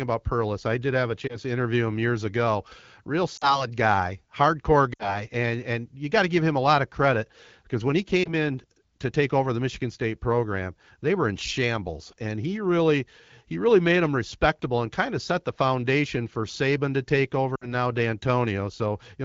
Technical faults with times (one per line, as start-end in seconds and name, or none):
1.27-1.37 lost AMR speech frames
3.37-3.65 lost AMR speech frames
4.94-5.24 lost AMR speech frames
8.24-8.30 lost AMR speech frames
17.55-17.68 lost AMR speech frames